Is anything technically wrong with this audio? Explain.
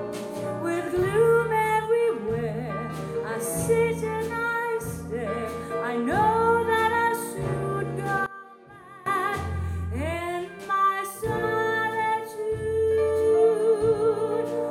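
Yes. One channel inverted, from 8.26 to 9.06 s: for this stretch the sound drops by about 21 dB and nearly vanishes. The likely cause is one stereo channel flipped in polarity, so that when the two channels combine, everything they share cancels. What remains is only the small difference between the sides, a faint, weak trace of the sound until normal level returns after 9.06 s.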